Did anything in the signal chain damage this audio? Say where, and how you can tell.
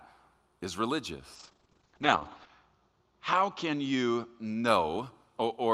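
Yes. From 1.36 s to 4.73 s the speech turns muffled and rough, worst for about 1.17 s, as the top end narrows from 20 kHz to 8 kHz. This is a call bitrate drop at the codec: a falling bandwidth estimate forced the encoder from 64 to 8 kbps.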